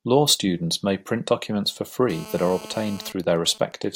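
From 2.10 s to 3.12 s a GSM phone buzz sits under the speech at about 17 dB below it. A nearby 2G handset in a call transmits in bursts 217 times a second, and the audio circuitry rectifies them into a hard, raspy 217 Hz buzz rich in harmonics.

From 3.12 s to 3.85 s the steady buzz gives way to GSM signalling bursts, roughly 25 dB below the speech. With the handset's user silent in the call, the phone sends only short groups of bursts, heard as even ticks with a longer 217 Hz buzz twice a second.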